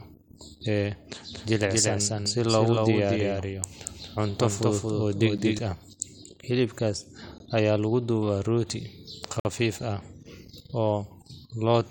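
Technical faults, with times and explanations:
1.33–5.58 s: doubled audio track. A second, full-band copy of the speech runs about 200 ms behind the original and roughly 5 dB quieter, so each syllable is followed by a dry, echo-like repeat with no decay or room colour. It likely comes from a second, slower capture path mixed in with the first. On a spectrogram, every feature appears twice, shifted about a fifth of a second apart, and the copy starts and stops abruptly at both ends.
5.38 s, 7.38 s and 9.40–9.45 s: gap between stream segments. The sound cuts to silence three times, at about 2 s intervals, which matches a 2 s segment length. The holes last 10 ms, 18.3 ms and 51.7 ms. The time stamps of consecutive segments leave small gaps, and the player fills them with silence, so no audio is lost. A waveform shows flat, hard-edged notches, and a spectrogram shows thin vertical blank strips across all frequencies.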